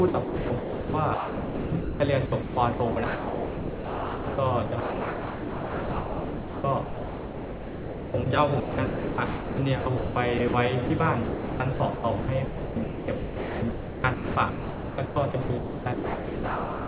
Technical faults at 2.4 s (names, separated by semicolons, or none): sound chopped by the voice detector